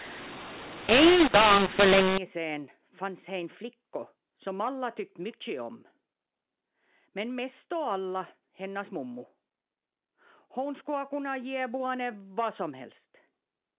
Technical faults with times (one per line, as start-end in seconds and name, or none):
0.00-2.18 mu-law and A-law mixed up